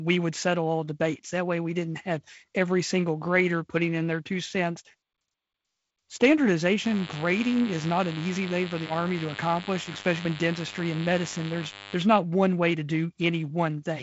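A speech clip with DECT cordless phone buzz from 6.84 to 11.94 s. It is a thin, steady buzz at 100 Hz, rich in harmonics, and sits fairly high against the speech. A nearby DECT handset or base sends a radio burst every 10 ms, and the audio circuitry rectifies it into sound. The band stops near 7.7 kHz, with the light hiss of G.722 wideband telephone coding.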